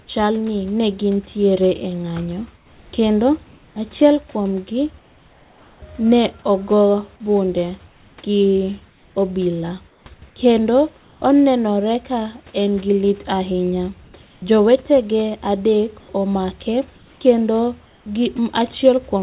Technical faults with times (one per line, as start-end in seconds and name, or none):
2.56-3.76 comfort noise in place of the background
4.98-5.82 comfort noise in place of the background
7.88-11.22 comfort noise in place of the background
14.04-14.42 comfort noise in place of the background
16.96-18.06 comfort noise in place of the background